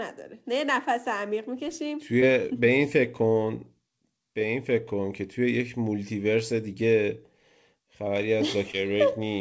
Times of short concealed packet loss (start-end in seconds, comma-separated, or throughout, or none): 2.20-2.23, 8.71-8.75